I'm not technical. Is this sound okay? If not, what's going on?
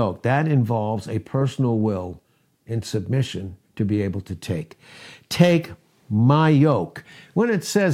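Yes, the recording sounds technically sound, with nothing in it that points to a problem in how it was captured, processed or played back.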